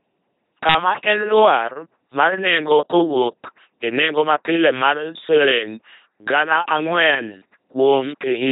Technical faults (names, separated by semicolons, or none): LPC-10 vocoder